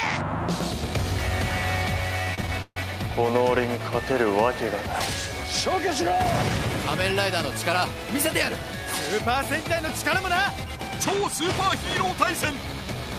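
From 2.25 to 2.78 s the audio suffers repeated stalls (stutter): packets arrived late, the jitter buffer ran dry five times, and the receiver stretched the last sound to bridge each wait, covering about 208 ms, with the longest gap 143 ms, roughly two fifths of that half second. Unlike packet loss, nothing is cut out; the sound hesitates and drags in short catches, then resumes where it left off.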